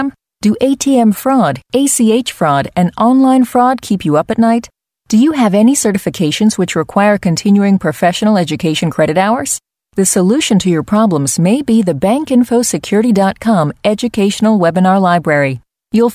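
Nothing in the speech recording stood out as a technical problem on listening.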